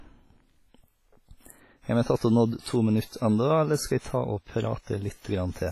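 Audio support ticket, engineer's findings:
Whole clip: heavy ringing, washy hiss breathing with speech, not steady floor; none above 15.4 kHz. Likely WMA compression, long-block quantisation noise, fitting 24 kbps.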